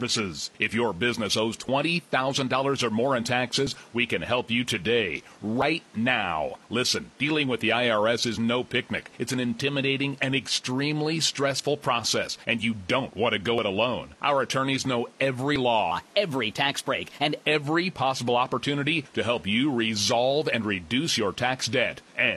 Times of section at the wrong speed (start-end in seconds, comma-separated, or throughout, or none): 15.92-17.46